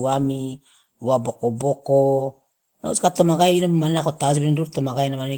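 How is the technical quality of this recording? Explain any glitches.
No faults or glitches heard.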